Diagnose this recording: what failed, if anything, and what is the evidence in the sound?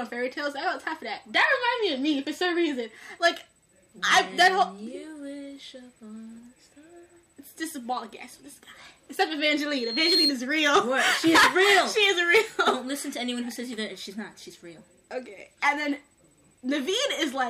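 Loudspeaker feedback squeal, in the acoustic loop between playback and the microphone. From 9.67 to 10.34 s a single tone at 4.2 kHz swells over about half a second and rises several dB above the sound. The microphone hears its own loudspeaker, and loop gain exceeds one there.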